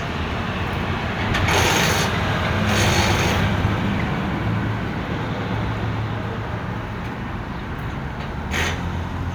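A recording of everyday sounds with no technical faults.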